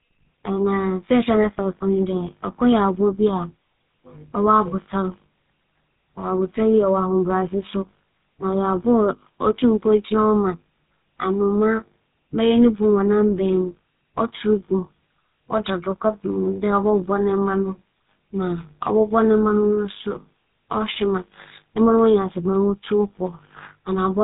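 Throughout the speech, the GSM full-rate codec leaves a plainly audible buzzy, gravelly roughness, which fits a 13 kbps first-generation mobile codec. It rebuilds the voice from a vocal-tract model driven by sparse pulses. A spectrogram shows nothing above 4 kHz and coarse, smeared harmonics.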